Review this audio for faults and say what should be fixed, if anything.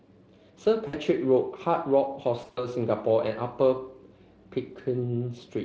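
At 0.87 to 0.95 s, and again from 2.41 to 2.67 s, the speech smears into a brief, fading stretch of sound and stays thin for a moment afterwards. This is VoIP packet loss concealed by the speech codec. The decoder replayed its last pitch and filter at falling gain, about 60 ms in the first gap and 120 ms scattered over 160 ms in the second, with runs up to 60 ms. The Speex coding itself leaves only light damage. A jitter buffer with forward error correction or redundancy would prevent these dropouts.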